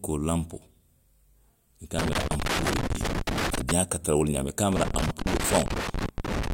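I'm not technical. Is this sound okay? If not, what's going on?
No. The speech breaks into irregular crackling and scratching from 1.99 to 3.71 s and again from 4.72 to 6.52 s: loose connector crackle, from a worn or dirty plug contact cutting in and out.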